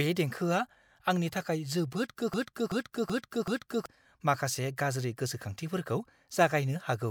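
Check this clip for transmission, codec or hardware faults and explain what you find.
There's one clear fault here, a broken-record loop. From 2.34 to 3.86 s, a 0.38 s fragment of speech repeats four times back to back, most likely from a stalled stream replaying its last buffer, so the original audio there is lost.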